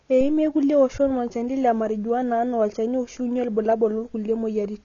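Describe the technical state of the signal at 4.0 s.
AAC compression is present at 4.0 s, as it is across the whole clip. Nothing sounds above 6.9 kHz, and the speech is dull with a watery, fizzy smear on sibilants. That is likely AAC-LC discarding and coarsely quantising upper frequency lines, which fits a bitrate near 24 kb/s.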